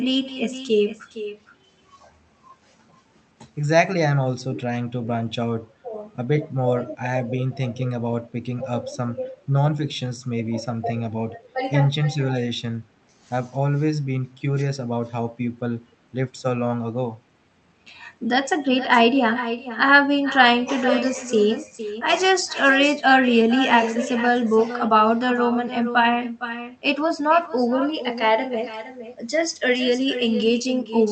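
Echo with no canceller runs through the whole speech clip: the far end's loudspeaker feeds its microphone and nothing strips that out, so every phrase returns about half a second later as a thinner copy, roughly 12 dB below the talker.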